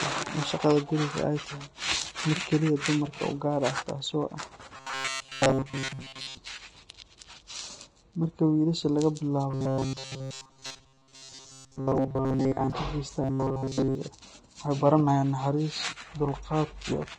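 Speech with Vorbis compression damage plainly audible throughout, likely from encoding at a low bitrate of around 34 kbps. The treble sounds hissy and grainy, and a spectrogram shows a lowered cut-off with speckled, noisy energy just below it. Robotic sound from repeated short buffers turns the voice into a rigid, metallic 133 Hz buzz at 4.77–6.37 s, 9.50–12.72 s and 13.22–13.95 s. The cause is likely a short stretch, about 7.5 ms long, being replayed while most of the real audio is skipped. The waveform shows identical repeating cycles there, and the spectrogram shows flat, evenly spaced harmonic lines at multiples of 133 Hz.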